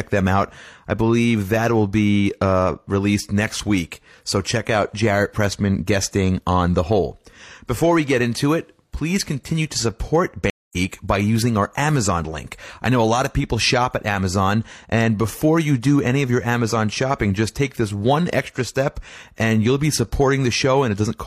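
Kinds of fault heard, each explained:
Stream reconnect: the speech cuts to silence for about 0.21 s, then resumes about 0.2 s further on, skipping material rather than simply pausing as a plain dropout would.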